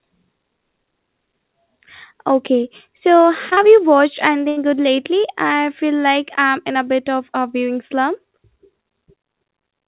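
A speech recording carried over a call link, band-limited with nothing above 4 kHz, which fits a narrowband G.711 mu-law path at 64 kbps. At 3.22 to 3.25 s, and at 3.49 to 3.53 s and 3.53 to 3.59 s just before "you watched", the sound briefly smears and wobbles. This is short concealed packet loss: 20, 20 and then 40 ms of audio never arrived in time, and the receiver covered each hole by extending the preceding sound before blending back into the real signal. A longer gap follows at 4.49 to 4.58 s, between "you watched" and "good lately I feel", where the last sound is held and fades and then resumes further on. That is a burst of packet loss. About 80 ms went missing in a row, so the receiver kept continuing the last sound and turning it down until real audio returned, and the stretch in between is gone.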